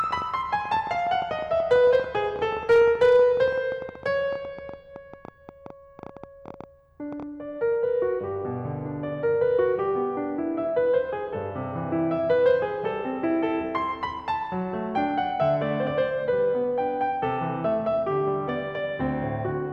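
A music recording with two separate faults. From 0.04 s to 7.2 s a train of clicks runs over it at roughly 9.6 per second, unevenly spaced, some seventy in all. The clicks share much the same shape and reach a few decibels above the music, so they tick through both loud and quiet passages. The likely source is electrical interference from nearby equipment or a faulty connection or power supply, which would inject a repeated pulse like this. Hard clipping appears at 1.72 to 1.96 s, 2.70 to 3.42 s and 12.31 to 12.51 s. The level there exceeds what the converter or gain stage can pass, by about 2 dB, 3 dB and 1 dB respectively, so waveform peaks are sliced flat. The flattened tops generate high-order harmonics, heard as brief crackle on the loudest moments. It is harshest in the longer 2.70 s stretch, where the overdrive is greatest.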